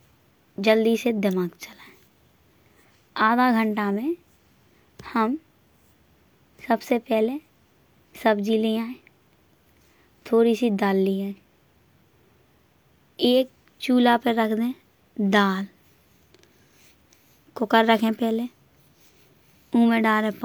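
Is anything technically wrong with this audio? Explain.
No, nothing technically wrong can be heard in this speech clip. No moment in it calls for a technical explanation.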